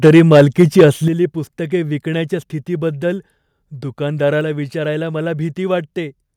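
Input gain set too high is the likely cause of the microphone overload from 0.04 to 0.85 s. Peaks drive the converter about 6 dB past its ceiling, and the tops of the waveform are sheared flat on roughly 7 percent of samples. In the speech, this gives a harsh, crackling edge to the loudest syllables across that first stretch, a gritty distortion that sits on top of the voice.

Automatic gain control in the call software likely reacted to this by stepping the microphone volume down twice. At 0.08 s, the input level drops by about 2 dB, a small but sudden dip while the clipping is still under way. At 1.08 s, after the overload has ended, a much larger cut of about 9 dB follows. Voice and background fall together in a single abrupt step, and the speech is noticeably quieter from that point.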